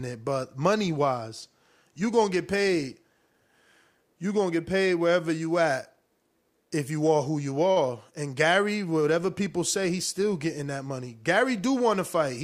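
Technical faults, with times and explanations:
7.71–7.78 s, short stall from a late packet: right after "you are who you", one sound is held 48 ms too long, then speech resumes with nothing lost. A late packet emptied the jitter buffer, so the receiver stretched the last sound, adding 48 ms of delay.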